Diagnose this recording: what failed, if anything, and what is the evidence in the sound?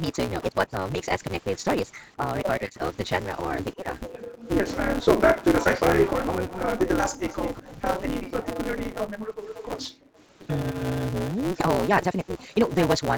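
At the driver or buffer stage there is a block size mismatch (truncated): one stage hands over longer blocks than the next reads, and the tail of each block is discarded. The sound points to a read block of about 256 samples. The result is a steady 188 Hz buzz under the whole recording, at the block rate, and the speech runs about 1.88 times faster than normal while keeping roughly its natural pitch.

Between 2.17 and 4.12 s, and again from 7.6 to 10.82 s, the talker's speech dips. The first stretch falls by up to about 30 dB over roughly a second in total, and the second by up to about 40 dB over roughly one and a half seconds. This is likely speech suppressed in double talk. The call processing's echo canceller could not separate the near talker from the far side playing at the same time, so it attenuated both.

Background gating by the echo canceller shows up as the room sound being pulled down while the loudspeaker was active. 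From 4.27 to 6.46 s the background drops by up to about 40 dB, for roughly a second in total. A shorter dip at 9.24 to 9.92 s reaches about 35 dB, lasting roughly 0.2 s. Each time the ambience returns once the canceller releases.

From 6.48 to 9.89 s a delayed copy of the speech trails the original by 390 ms, sitting around 15 dB below it. This is likely an echo leak at the far end's call processing. Its echo canceller failed to remove all of the loudspeaker sound its microphone picked up, and the residue was sent back. This leak overlaps the second suppression stretch and the short background dip.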